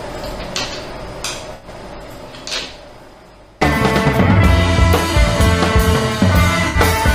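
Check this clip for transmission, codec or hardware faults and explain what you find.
There are three dropouts from AAC frame loss with concealment. At 1.54–1.68 s, 4.34–4.36 s and 6.68–6.78 s, coded frames failed to arrive: roughly 85 ms, 21 ms and 64 ms of audio, which fits about four, one and three frames. The decoder covered each gap by reusing the last good spectrum with altered phase or smoothed energy. So each gap becomes a brief smeared, noisy or phasey patch rather than a clean cut.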